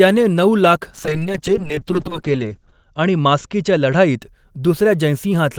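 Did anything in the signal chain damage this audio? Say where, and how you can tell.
Yes: a call bitrate drop at the network and codec stage, 0.96 to 4.27 s, cut the encoder from 32 to 8 kbps. Audio bandwidth shrank from 20 kHz to 8 kHz, leaving the speech muffled and coarse.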